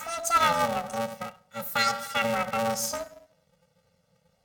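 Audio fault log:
Throughout: planar audio read as interleaved. The speech carries a robotic buzz at about 345 Hz with no clear octave shift. Each 2.9 ms block, which fits a 128-sample planar block, holds all its left samples followed by all its right samples, but it is read as alternating left-right pairs. Each block therefore plays twice at double speed, left then right. Overall pace stays correct, but the blocks are too short to carry a pitch shift, so the repetition is heard as a buzz at the block rate.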